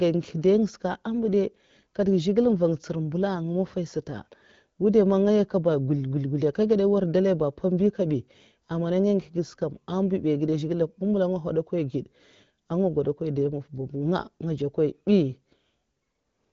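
No technical faults can be heard in this speech.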